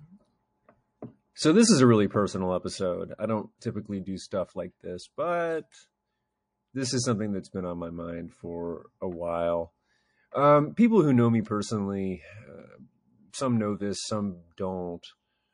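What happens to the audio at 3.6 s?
A short hiss of about 34 ms, from 3.58 to 3.62 s, rises about 17 dB out of the quiet ahead of an attack, softening its onset. This is pre-echo. The encoder spread quantisation noise across a long block of about 52 ms without switching to short blocks, smearing noise into the moment before the attack.

Throughout, the sound is watery and swirly, likely from MP3 compression at a low bitrate, which fits roughly 40 kbps. The encoder drops weak frequency lines from frame to frame.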